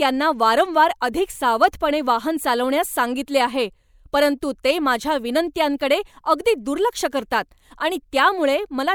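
At 1.63 s a brief burst of hard clipping occurs: the speech peaks push about 2 dB past what the signal path can carry, so the excess is simply sheared off. The flattened crests generate harmonics well above the voice's natural range, heard as a short crackle on the loud moment. In a waveform view the peaks sit as flat plateaus; a spectrogram shows a thin vertical smear of high-frequency energy at that instant.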